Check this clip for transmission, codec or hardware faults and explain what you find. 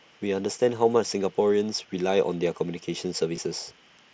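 One fault shows up, at 3.36 s. It is concealed Bluetooth headset packet loss. About 15 ms of audio went missing, which fits two lost packets. The receiver filled the gap by repeating a matching stretch of the preceding waveform. The patch is brief, so it sounds like a buzzy blip with a slight warble as the real sound resumes. The link uses the mSBC headset codec, which limits the sound to 8 kHz.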